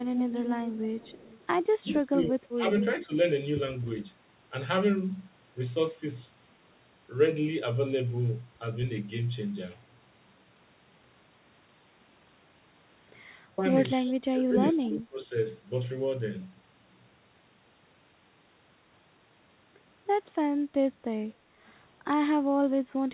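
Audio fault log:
0.02–1.47 s and 14.07–14.11 s, echo leak: a delayed copy of the speech trails the original by 265 ms, about 10 dB down in the first stretch and a brief scrap about 20 dB down later. Likely a far-end loudspeaker echo slipping past its echo canceller and getting sent back.
1.82–2.67 s, 3.06–3.10 s, 13.45–13.63 s and 14.32–15.33 s, speech suppressed in double talk: the speech dips in level. It drops by up to about 20 dB and about 15 dB over most of the first and last spans, and by about 10 dB in the two short ones. This likely comes from an echo canceller ducking the talker while the other side was also speaking.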